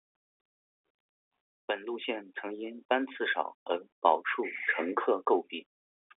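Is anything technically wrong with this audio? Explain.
No, this is speech over a G.711 telephone line, band-limited to roughly 250 Hz to 3.6 kHz with nothing above 3.8 kHz, and that narrow band is simply what the telephone format carries.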